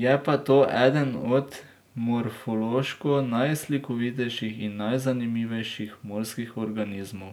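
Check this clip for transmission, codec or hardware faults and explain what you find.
No transmission, codec or hardware faults are audible here.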